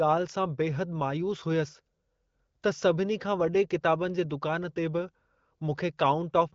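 No faults detected in the speech; the wideband HD Voice (AMR-WB) coding leaves nothing above about 7.1 kHz and only a light coded texture, consistent with one of its higher rates.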